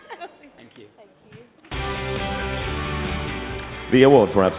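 A skip ahead occurs at 0.58 to 0.60 s. Later audio was already waiting in the jitter buffer, so roughly a second of the stream was thrown away and playback jumped straight to the newer material. Nothing fills the gap. The audio before and after the cut is butted together almost directly, and the content leaps forward abruptly instead of flowing on.

A jitter buffer speed-up follows from 0.69 to 1.62 s, at about 112% speed, and another runs from 3.94 to 4.47 s, at about 111%. In both stretches the receiver was holding more audio than its target delay, so it trimmed many tiny pieces, each one or a few pitch periods long. That removed about a tenth of a second in the first stretch and around 70 ms in the second. The pitch stays put, but these passages run noticeably quicker and sound hurried. Throughout, the audio passes through a G.711 mu-law call path at 64 kbps, which leaves nothing above 4 kHz.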